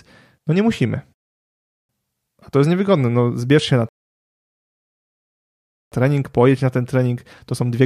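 At 1.14 s the speech cuts to silence and stays silent until 1.89 s, then carries on from exactly the point where it broke off. This is a rebuffering stall: the player used up its downloaded audio and waited for more data. A second, longer stall runs from 3.89 s to 5.92 s, adding about 2.03 s against 0.75 s for the first. Nothing is skipped; each gap only inserts dead time.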